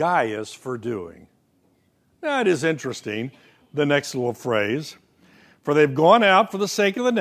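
No faults are audible anywhere in the recording.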